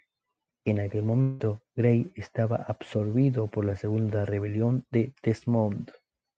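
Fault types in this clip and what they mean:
Long network dropout: from 1.21 to 1.41 s the audio stops arriving and about 180 ms of it is never played. The receiver fills that whole gap by stretching the last sound into a fading buzz or hiss, with no dead silence, likely from a network dropout.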